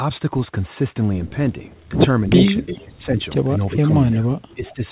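At 1.72 to 1.83 s comes the first echo leak, a copy of the far voice about 0.36 s late. The echo canceller likely let part of the loudspeaker sound through. Further echoes follow at 2.39 to 2.84, 3.67 to 3.76, 4.13 to 4.20 and 4.65 to 4.73 s. They sit about 40, 10, 15, 20 and 25 dB below the speech.

From 2.29 to 3.19 s and 3.69 to 4.83 s, the speech is suppressed in double talk. The canceller likely mistook this talker for echo. The voice dips by up to about 15 and 10 dB, for roughly half a second each. Nothing is heard above 4 kHz, which fits a narrowband G.711 call.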